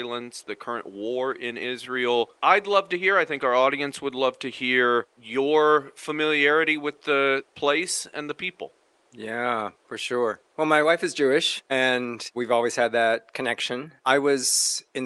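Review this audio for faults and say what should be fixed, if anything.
No faults; nothing needs fixing.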